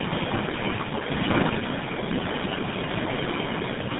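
Tandem speech coding runs through the whole clip. The speech sounds like it passed through about four speech coders in a row, ending in GSM full rate, each re-coding the last one's damage. Nothing survives above 3.8 kHz. The speech is rough, muffled and warbly.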